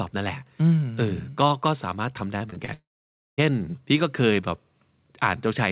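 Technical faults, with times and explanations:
2.38–2.70 s, repeated packet loss (robotic sound): Four short holes, the longest about 22 ms, are each patched by stretching the preceding sound. The repeated fills cover roughly a quarter of this span, so the already narrowband audio, with nothing above 4 kHz, turns choppy.
2.74–3.40 s, long network dropout: About 0.64 s of audio is lost. The last sound is briefly carried on as a fading buzz or hiss, then about 0.55 s of silence follows before the audio resumes without the missing part. The likely cause is a sustained interruption in arriving packets.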